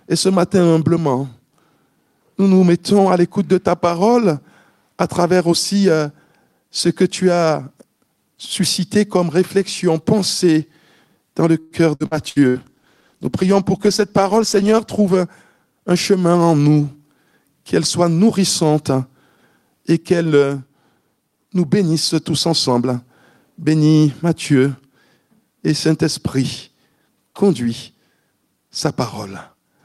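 Repeated packet loss (robotic sound) runs from 11.59 to 12.58 s. Five separate holes open in quick succession, the longest about 113 ms. Each one is covered by stretching the last received sound forward, so roughly a third of that second is synthetic fill. It comes across as choppy, with small pieces missing between repeats.

A call bitrate drop follows from 12.1 to 15.28 s, overlapping the end of the losses. The encoder's bit budget collapsed and stayed low for just over three seconds. What is heard fits a fall from around 48 kbps to about 17 kbps. The coarser coding makes the sound rough and watery, and the top end is trimmed away, leaving it muffled until quality returns.

A jitter buffer speed-up occurs from 22.52 to 23.08 s. The receiver was holding more queued audio than it wanted, so it shortened playback by cutting out tiny slices a pitch period or so long, one after another, around 50 ms in total. 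Playback runs at about 108% of normal speed without any change in pitch, giving a brief hurried, pressed-forward feel.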